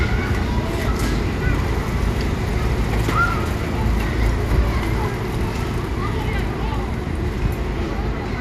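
MP2 compression damage runs through the whole recording, from start to finish, and it is plainly audible. The everyday sounds come across dull, with a gurgling, granular texture, which points to likely MPEG Layer II coding at a starved rate, fitting something near 80 kbps. With so few bits spread across its 32 sub-bands, the encoder shuts off upper bands, so they flicker in and out, and coarsely quantises the bands it keeps.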